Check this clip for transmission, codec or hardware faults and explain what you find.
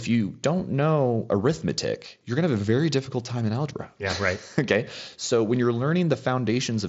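Nothing here points to a transmission, codec or hardware fault; the speech comes over a Bluetooth mSBC headset link at about 61 kbps, with the top end stopping near 7.7 kHz as that wideband codec normally does and just the light grain you'd expect from it.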